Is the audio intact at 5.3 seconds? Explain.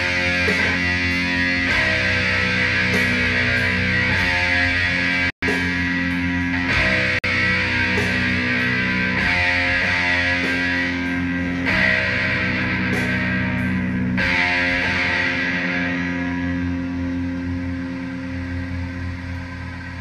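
No. At 5.30 s the sound cuts to silence for 124 ms, resuming at 5.43 s. This is likely a Bluetooth stall. Interference held packets up, the headphone buffer ran empty, and playback paused until resent packets arrived.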